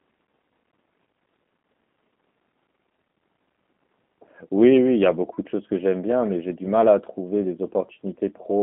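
Throughout, G.729 codec damage: speech rebuilt from a pulse model sounds rough and synthetic, not merely muffled as plain band-limiting would, with nothing above 3.7 kHz, which fits 8 kbit/s G.729.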